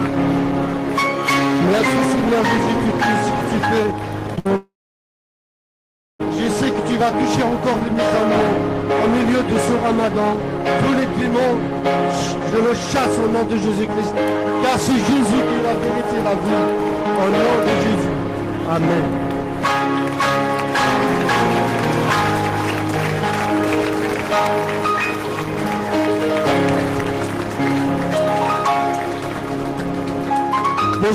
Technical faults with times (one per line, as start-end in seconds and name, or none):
4.35-4.48 short concealed packet loss
4.39-4.47 burst of packet loss
4.56-6.21 long network dropout